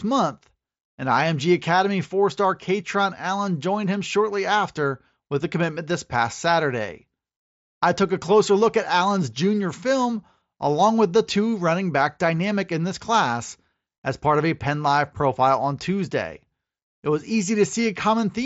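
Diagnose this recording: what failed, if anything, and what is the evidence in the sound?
Nothing failed: the speech comes through a Bluetooth mSBC headset codec working as designed, with the band stopping at about 7.7 kHz and only light coding texture.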